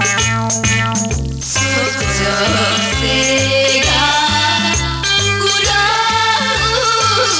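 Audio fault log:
No faults heard.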